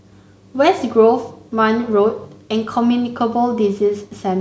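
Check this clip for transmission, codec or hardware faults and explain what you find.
Nothing in this speech recording points to a transmission, codec or hardware fault.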